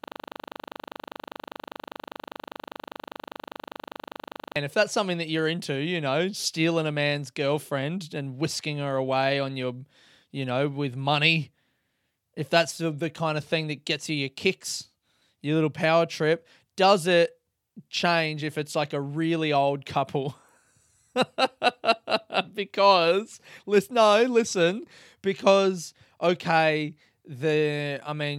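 From the very start to 4.56 s, the clip is caught in a system hang loop. It is already under way when the audio begins. The computer or its driver stalled, but the sound hardware kept replaying its ring buffer. A single 40 ms slice of speech repeats exactly, over a hundred times. At 25 repeats per second it forms a hard, rattling buzz. Normal speech returns with "if that's something that".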